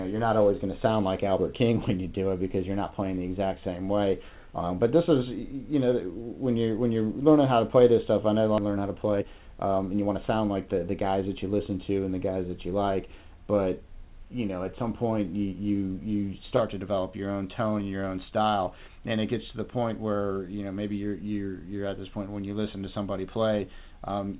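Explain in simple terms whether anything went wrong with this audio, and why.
Yes, two things went wrong, both right after each other.

At 8.58 to 8.60 s, the sound suddenly jumps forward, as if a short piece were cut out and the two ends glued together with no pause. This is a skip ahead: about three-quarters of a second of audio never got played. It was thrown away, either lost on its way over the network or discarded by the receiver's waiting area for incoming audio (the jitter buffer) when it got overfull, because later audio was already queued up.

From 8.68 to 10.56 s, the sound runs noticeably fast, at about 112% of normal speed, so it feels rushed even though the pitch doesn't rise. This is a jitter buffer speed-up. The jitter buffer was holding more audio than it wants to, which adds delay. To catch up, the receiver snipped out many tiny slices, each only a vibration cycle or a few long, over and over. 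In total that removed roughly a fifth of a second.

The audio travelled over an internet call connection, which is also why the sound has nothing above 4 kHz and a somewhat narrow, telephone-like quality. That limit comes from the call's audio format and isn't a fault.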